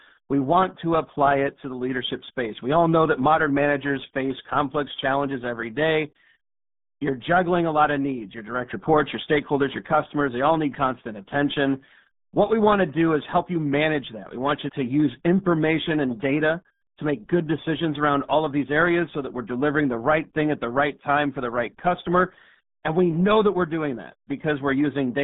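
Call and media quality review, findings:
Muffled, gargly speech with a narrow phone-line band, roughly 150 Hz to 3.6 kHz, nothing above 3.8 kHz, throughout. RealAudio 14.4 codec, heavy damage; coarse low-rate speech coding consistent with an 8 kbit/s dial-up-era encoder.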